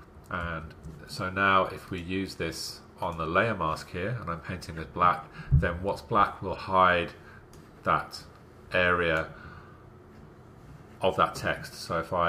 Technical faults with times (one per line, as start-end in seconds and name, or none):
4.74-4.81 corrupt frame decoded
6.55-6.60 corrupt frame decoded